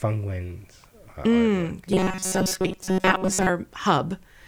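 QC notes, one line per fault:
1.93 to 3.49 s, robotic sound from repeated short buffers: fresh audio was arriving too slowly, and the playback side most likely kept looping its last chunk of roughly 5.3 ms to fill the gaps, discarding much of the real signal over most of this stretch. That fixed loop period stamps a steady buzz near 188 Hz onto the speech, so it turns rigid and metallic while still loosely tracking the syllables.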